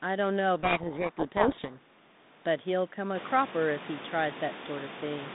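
Speech, with a codec payload misread from 0.56 to 1.78 s: harsh distortion buries the speech, which points to the G.726 code words arriving in reversed bit order and being decoded as valid but wrong values. Unlike the lighter, level-following rasp of low-bitrate G.726, this one starts and stops abruptly. Clean decoding returns at 1.78 s, and the room noise rising near 3 s belongs to the recording.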